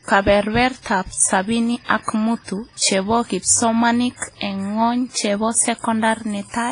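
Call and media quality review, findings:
Speech ringing and washy throughout, with hiss that swells and sinks with the voice; nothing above 10.1 kHz. Likely WMA compression, heavy damage fitting a 24 kbps stream: long transform blocks smear quantisation noise over tens of milliseconds, weak spectral lines are zeroed, and the top band is cut.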